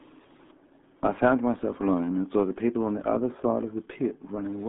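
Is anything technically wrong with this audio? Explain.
Yes. Throughout, this speech carries RealAudio 14.4 codec damage: nothing above 3.8 kHz, and a heavily squeezed 200–3600 Hz band, which fits an 8 kbit/s dial-up coder, leaving it muffled and gargly.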